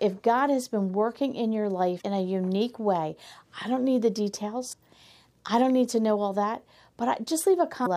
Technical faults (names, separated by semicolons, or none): damaged data in a compressed stream